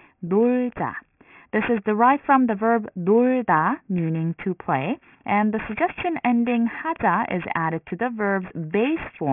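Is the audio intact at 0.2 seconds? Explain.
No, aliasing affects 0.2 seconds, as it does the entire speech clip. Content above about 3 kHz folds back down as unrelated tones, which fits a reduction to a 6 kHz rate without a low-pass filter. Sibilants sound gritty and metallic, with alias energy roughly 15 dB below the speech.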